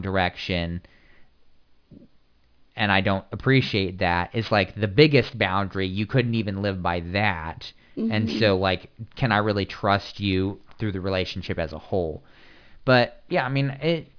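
Speech with aliasing throughout: it was downsampled, which points to roughly 11 kHz, without an anti-aliasing filter, so content above 5.5 kHz folds back as gritty, metallic sibilance some 25 dB below the voice. A spectrogram shows energy running hard up to 5.5 kHz, with mirrored, unrelated high-frequency traces.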